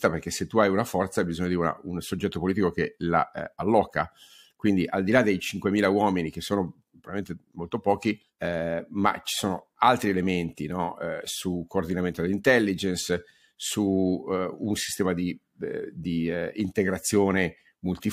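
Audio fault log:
The speech signal has no audible technical faults at any point and stays steady and continuous throughout.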